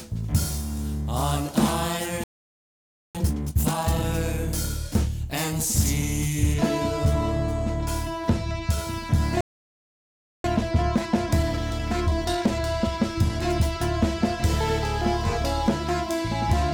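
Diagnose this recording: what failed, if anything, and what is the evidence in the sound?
From 0 to 6.54 s the audio is thin, bright and hissy at the top. It sounds like pre-emphasis left on: the CD-style 50/15 µs treble boost was stored but not undone at playback, most likely because the player ignored the de-emphasis flag. The highs sit about 8 dB hot at 10 kHz relative to 1 kHz. On a spectrogram the band above roughly 5 kHz is visibly brighter until 6.54 s, then drops to a normal balance.

A playback stall silences the output from 2.24 to 3.15 s (910 ms) and again from 9.41 to 10.44 s (1.03 s). The sound cuts off mid-flow both times. It is likely a buffer stage fault, with the player starved of data or its thread blocked. On the waveform each gap is a near-flat line with abrupt edges. On the spectrogram it is a dark vertical band.

Time-compressed catch-up follows each stall. From 3.15 to 4.05 s the audio runs at 2.0x speed. 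From 10.44 to 13.44 s it runs at 1.1x. In both stretches it sounds hurried but keeps its pitch. On a spectrogram the harmonic spacing stays unchanged while events crowd closer together in time, with seams at the splice points. The waveform shows compressed envelopes.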